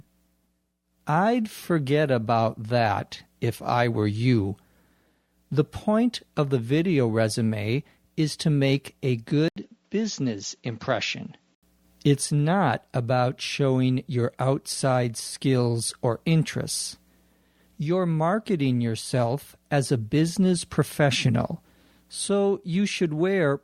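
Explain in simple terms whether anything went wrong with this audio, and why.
At 9.48 s the sound cuts out for about 80 ms, then comes back duller and slightly quieter, with nothing above 7.6 kHz and a faint new background hiss, until 11.63 s. This is an input switched to a poorer device, likely a lower-quality microphone taking over briefly.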